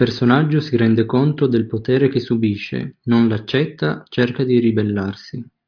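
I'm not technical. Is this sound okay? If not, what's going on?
Yes, this speech recording sounds okay. Nothing in it points to a technical problem you'd need to worry about.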